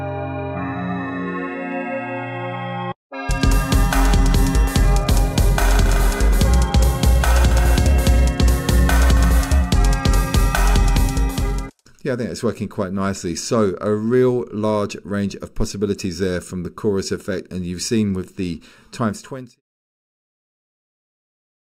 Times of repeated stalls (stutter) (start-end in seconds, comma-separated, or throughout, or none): none